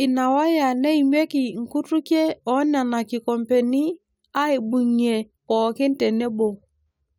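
No technical faults can be heard in the speech.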